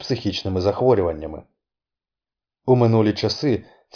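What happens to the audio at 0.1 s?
Nothing goes wrong at 0.1 s; the speech there plays through intact, with no dropout, click or distortion.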